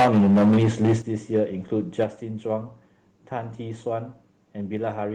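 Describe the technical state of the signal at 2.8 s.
At 2.8 s the signal is intact, with no audible fault at that point in the speech.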